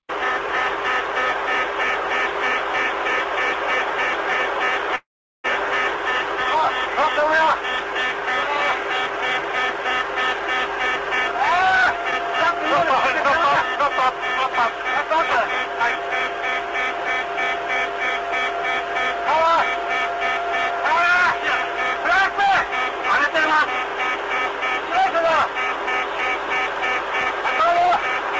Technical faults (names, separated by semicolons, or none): call audio freeze; short concealed packet loss; jitter buffer speed-up